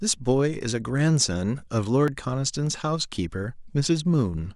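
Dropped buffer (overrun) at 2.08 s: a tiny skip in the speech, likely from samples overwritten before being read, losing under two milliseconds.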